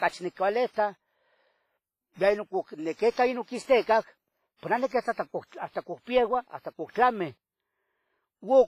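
Speech with heavy WMA compression throughout: a ringing, washy hiss that swells with the speech and smears over tens of milliseconds, unlike plain low-pass filtering, which would not add that breathing hiss. Nothing is heard above 15.4 kHz, and the damage fits a bitrate likely near 24 kbps.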